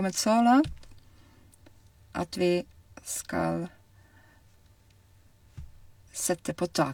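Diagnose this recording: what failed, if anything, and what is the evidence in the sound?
Nothing failed in this recording, and no stage of the chain shows audible evidence of a fault.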